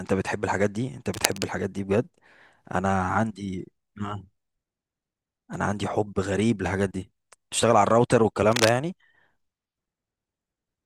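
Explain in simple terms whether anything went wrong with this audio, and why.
Two short bursts of cable scratch noise break into the speech, from 1.14 to 1.44 s and again from 8.52 to 8.69 s. Each sounds like a brief rough scratching or crackling over the speech. The first is slightly quieter than the speech, while the second is about as loud as it. The likely cause is a worn cable or plug being moved, so that its electrical contact flickered and added uneven noise to the signal.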